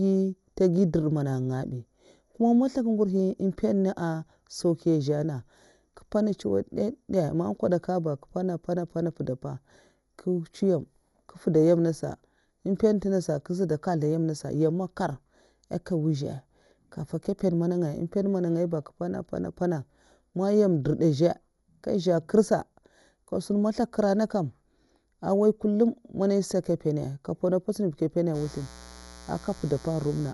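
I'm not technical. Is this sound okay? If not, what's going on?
No, the recording has three problems.

Channel delay (comb filtering) runs through the whole clip. One of the two stereo channels arrives a tiny fraction of a millisecond late, and when both are combined into one, parts of the sound cancel out at evenly spaced pitches, the first around 3 kHz. That gives the speech a hollow, slightly phasey quality, as if heard through a tube, and it never changes because the delay stays fixed.

Codec damage is also present from start to finish and is plainly audible. It is likely Dolby Digital compression at a low data rate. To save space, the encoder throws away everything above 11.5 kHz, which makes the speech dull and muffled. It also leaves many fine details empty and fills them with noise, so the speech has a rough, fluttery texture around it.

Mains buzz starts at 28.32 s and lasts to the end. 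Electrical interference from the power supply leaks into the audio, repeating with the 60 Hz mains cycle. The sharp spikes in it also produce higher overtones, so it sounds like a raspy, steady buzz rather than a soft hum, quieter than the speech.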